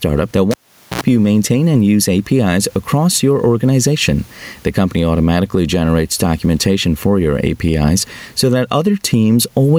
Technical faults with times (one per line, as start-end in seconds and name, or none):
0.00-9.78 gain pumping
0.51-1.01 cable pulled and plugged in